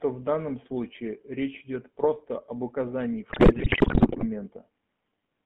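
A speech recording carries the GSM full-rate codec's buzzy, gravelly roughness throughout, within a 150 Hz to 3.4 kHz band. The grit, not just the narrowing, separates it from a plain telephone filter and fits 13 kbps GSM. From 3.30 to 4.26 s, GSM bit errors turn the sound into squawks, pops and gargling bursts rather than the silent gaps of lost packets, consistent with a heavy error rate corrupting decoder parameters.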